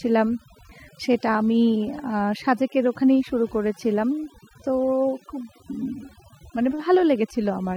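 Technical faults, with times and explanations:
Throughout: overdone noise removal. A noise reduction stage set too aggressively is shutting off individual frequency bands wherever they sit close to its noise estimate, taking quiet speech detail with them, so gaps fall to near silence with twinkling specks.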